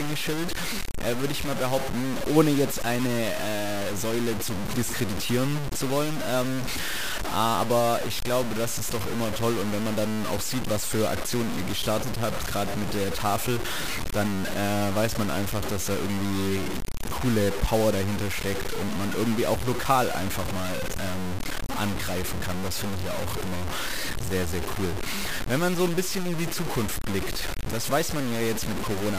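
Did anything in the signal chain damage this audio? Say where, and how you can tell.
Yes. Across the whole clip the speech carries a coarse, grainy distortion that rises and falls with the voice, and quieter passages turn gritty or sputter rather than fading smoothly. The error is only a few decibels below the speech itself. This points to low bit depth without dither, likely introduced at a sample-format conversion that truncated the signal to about 5 bits, so the rounding error tracks the waveform instead of forming steady hiss.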